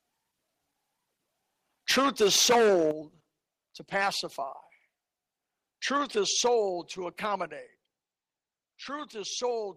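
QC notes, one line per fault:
1.89–2.91 s, 3.95–4.09 s, 5.94–6.56 s: microphone overload. The tops of the loudest moments are flattened, adding a crackly, squared-off edge. The first stretch is worst, about 14 dB over with roughly a fifth of samples clipped, then about 6 dB and about 4 dB. Likely input gain set too high.
1.92 s, 2.91 s, 6.47 s, 7.47 s: microphone volume stepped down. Level drops abruptly, background included, by about 2, 8, 3 and 4 dB. The 8 dB drop lands right as the first overload ends. Likely the call software cutting mic input after catching clipping.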